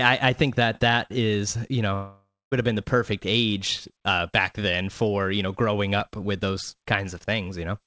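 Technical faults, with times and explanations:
1.94–2.53 s, long network dropout: the speech breaks into a buzzy continuation of the last sound that fades over about half a second, leaving roughly 0.23 s of near-silence before the voice resumes mid-stream with a part missing. This is likely a lost stretch of packets that the receiver concealed. A brief packet-loss glitch would last only tens of milliseconds and never fade to silence.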